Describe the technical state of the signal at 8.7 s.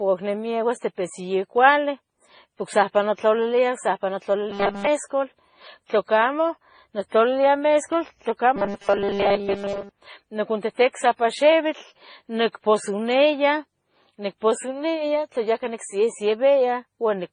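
At 8.7 s the speech has turned into a rigid, metallic buzz, with robotic sound from repeated short buffers. It runs from 8.56 to 9.89 s, just after "nictlalilia mescual". New audio is likely arriving too seldom, so a short stretch is replayed while most of the real sound is skipped. The buzz sits at 200 Hz, which fits a 5 ms buffer.

Underneath, the whole clip shows transcoding between lossy codecs. The likely chain is MP3 at 24 kbit/s, then AAC-LC at 32 kbit/s. Nothing remains above 9.7 kHz, and the two codecs' artefacts are heard together.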